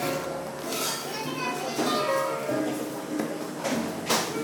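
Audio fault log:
throughout: wrong sample rate. Everything runs about 1.38 times too fast and sits roughly 5.5 semitones high, pitch and tempo shifted together. That fits 32 kHz material played back at 44.1 kHz with no conversion, so the samples simply go by quicker.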